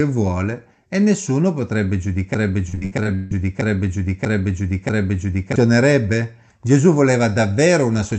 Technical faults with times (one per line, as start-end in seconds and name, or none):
2.34-5.56 broken-record loop
2.69-3.33 repeated packet loss (robotic sound)